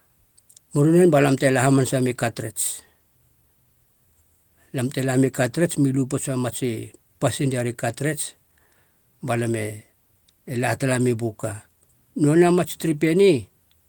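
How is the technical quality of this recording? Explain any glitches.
No glitches are audible here.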